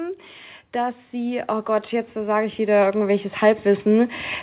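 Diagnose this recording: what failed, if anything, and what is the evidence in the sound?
In call processing, automatic gain rising lifted gain by about 13 dB from 0.72 to 4.21 s, so speech and background swell together under a band ending near 4 kHz.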